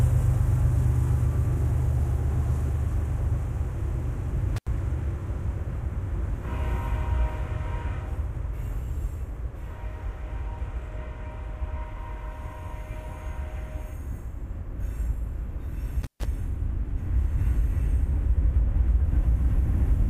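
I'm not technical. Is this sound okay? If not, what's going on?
No. The sound briefly cuts out with crackle around 4.56 to 4.67 s and 16.02 to 16.25 s. This is intermittent contact: a loose cable or plug momentarily lost connection.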